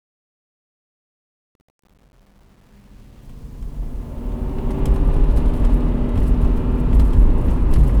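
From 0.0 to 4.81 s, the fade-in shows truncation distortion. The gain stage kept too few bits and added no dither, which fits roughly 9-bit resolution. Up to 3.91 s the quiet sound turns gritty before the fade clears.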